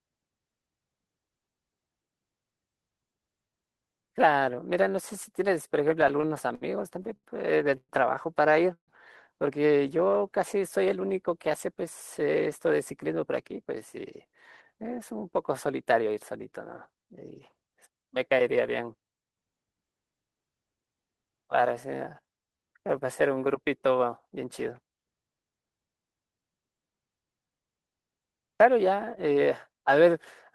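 From 6.01 to 7.92 s the speech suffers repeated stalls (stutter). Nine late-packet gaps are bridged by continuing the last sound, about 316 ms in all and none longer than 116 ms. They appear as smeared, repeated spectrogram frames breaking the syllable rhythm.

At 8.73 s comes a call audio freeze lasting about 148 ms, likely from packets held up in transit. The last sound buzzes on and fades, leaving 90 ms of silence, visible as a flat waveform gap before the speech resumes unchanged.

A jitter buffer slow-down runs from 9.97 to 10.19 s at 87% speed, adding 37 ms by repeating pitch periods. The pitch stays the same but the sound is drawn out. On a spectrogram the harmonics stay level and stretch sideways.

A jitter buffer speed-up covers 12.73 to 16.15 s at 105%, trimming roughly 200 ms. Another runs from 16.92 to 17.24 s at 111%, trimming about 50 ms. Short pitch-period pieces are removed without changing pitch, so the speech sounds hurried and its formant tracks look horizontally compressed.

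A second slow-down, from 22.22 to 23.49 s at 90%, adds 135 ms. The speech drags, and the waveform shows near-identical cycles repeated back to back.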